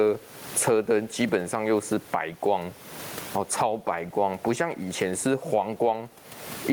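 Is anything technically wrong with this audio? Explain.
Yes, there is gain pumping throughout the speech. The room noise sits about 36 dB below the speech, and the level swings by roughly 25 dB. This is likely from input gain set far too high and a fast limiter or compressor clamping it down on each peak. Loud and quiet passages end up squashed close together. On a waveform the envelope looks flattened, with the noise floor rising between phrases. A spectrogram shows the broadband background brightening in gaps and dimming under speech.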